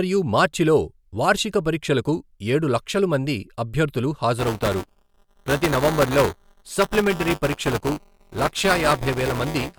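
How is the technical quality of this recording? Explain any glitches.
The recording is marred by buffer tearing from 4.39 s, right after "ఏడు లక్షలు మంది అభ్యర్థులు", through to the end. The writing program and the playback hardware have drifted, so their positions cross within each 5 ms period. About a tenth of every buffer carries audio roughly 10 ms stale, spliced in with abrupt joins. The result is a robotic 200 Hz buzz riding on the speech, absent in pauses. A spectrogram shows vertical striations every 5 ms and a comb of 200 Hz harmonics, and the waveform shows repeated step discontinuities.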